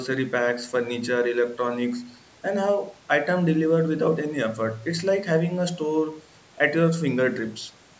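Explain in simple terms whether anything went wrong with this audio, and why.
Nothing went wrong: the speech passed through a call's normal microphone processing, which trims away the deepest bass and leaves nothing above 8 kHz, and that is how call audio ordinarily sounds rather than a defect.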